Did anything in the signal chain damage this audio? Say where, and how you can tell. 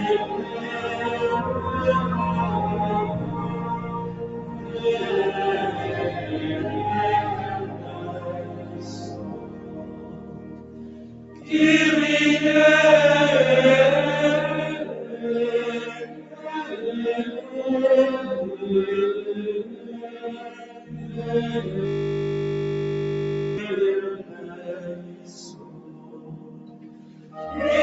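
Yes. A speech-tuned noise suppressor in the call processing stayed active on non-speech sound. It treats steady tones, ambience and decay as noise, so gain swings by about 15 dB across the clip. Attacks pass while sustained material sinks, and the sound pumps and thins.

The clearest sound cut by the noise suppressor falls at 0.43–0.72 s, 3.26–4.82 s, 7.62–11.51 s, 16.06–16.45 s, 19.69–20.20 s, 20.48–20.90 s, 24.22–24.67 s and 24.95–27.36 s. Held and fading sound drops by about 6 to 8 dB, and tails are cut short.

A system hang loop occurs in the driver/buffer stage from 21.85 to 23.58 s. The host stalled while the hardware kept replaying one 20 ms ring-buffer segment, so that sliver repeats at 50 Hz and produces a steady buzz instead of moving audio. The Opus call path at 48 kbps carries nothing above 8 kHz.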